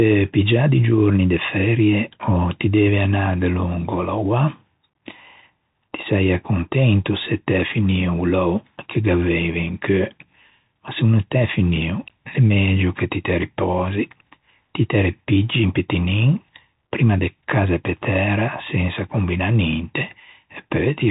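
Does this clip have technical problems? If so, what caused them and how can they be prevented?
Yes. The Bluetooth CVSD headset codec affects the speech from start to finish. Nothing above about 3.8 kHz survives, so the sound is boxed-in and telephone-like. The codec sends one bit per sample, saying only whether the signal rises or falls, with an adapting step size that fits a 64 kbps link. Loud, fast-moving high content outruns that step and distorts, s sounds turn scratchy, and a granular hiss sits underneath. To prevent it, record through a wired microphone or a Bluetooth wideband (mSBC or LC3) speech mode rather than the headset's narrowband profile.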